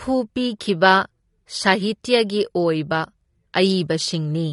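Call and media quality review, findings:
Dull, band-limited speech throughout, with swirly, fizzy sibilants; nothing above 11.1 kHz. Likely AAC compression, AAC-LC at a rate that fits 32 kbps: coarse quantisation starves upper bands, leaving spectral holes and smeared transients.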